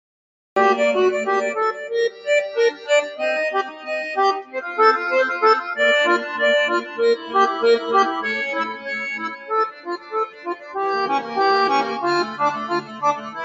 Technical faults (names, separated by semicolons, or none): noise suppressor applied to music or sounds; cut-off start; sound cut by the noise suppressor